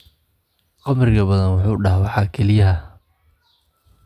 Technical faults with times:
none

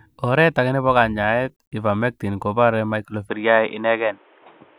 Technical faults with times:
3.29-4.78 input switched to a poorer device

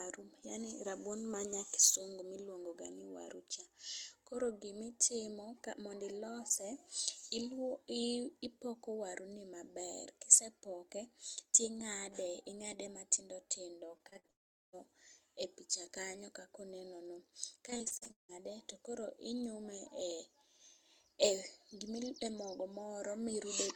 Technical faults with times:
13.97-14.31 repeated packet loss (robotic sound)
14.31-14.75 long network dropout
17.71-18.33 repeated packet loss (robotic sound)

